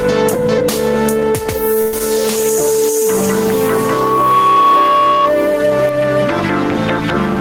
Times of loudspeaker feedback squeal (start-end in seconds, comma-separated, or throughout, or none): 3.52-5.35